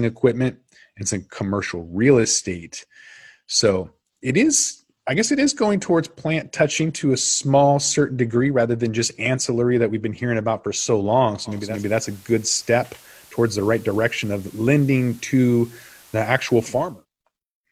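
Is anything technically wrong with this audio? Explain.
Yes. From 11.44 s, just after "about for so long", to 17.06 s there is digital radio blending to analogue: the receiver lost the digital stream and cross-faded over about 0.44 s to the station's FM broadcast, then returned. Hiss appears roughly 30 dB below the speech and level shifts about 1 dB. Unlike ordinary background noise, the hiss switches on and off with those smooth blends.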